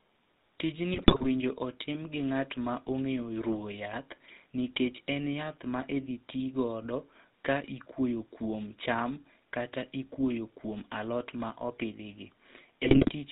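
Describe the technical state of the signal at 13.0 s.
At 13.0 s the speech is inside a burst of GSM bit errors running from 12.82 to 13.12 s, just after "alot ma opidhi gi". Corrupted filter, pitch and gain values make the voice squawk and gargle frame by frame, unlike a clean dropout's silence. Underneath, the GSM full-rate codec's pulse-driven excitation and 4 kHz ceiling give a steady buzzy roughness, present all along rather than bursting.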